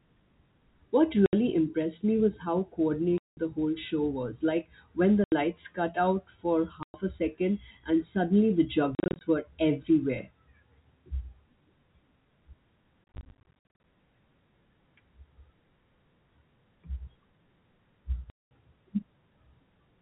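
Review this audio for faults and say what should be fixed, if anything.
The speech has packet loss filled with silence: hard-edged gaps at 1.26–1.33, 3.18–3.37, 5.24–5.32, 6.83–6.94 and 18.30–18.51 s, plus scattered dropouts across 8.95–9.21 and 13.05–13.83 s. Every gap is a multiple of 10 ms, which fits 10 ms packets. The receiver inserted silence where audio was missing, while the G.711 A-law telephone band is intact. To prevent it, add packet loss concealment and an adaptive jitter buffer, and use forward error correction or redundancy on the lossy link.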